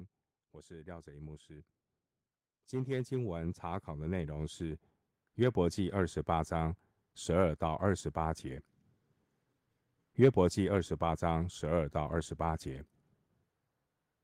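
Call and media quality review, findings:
Automatic gain rising at 0.51–1.78 s (about 6 dB) and 2.52–6.06 s (about 12 dB). Speech and background noise floor swell together. Capture-side AGC judging input too quiet, ramping gain up gradually rather than stepping.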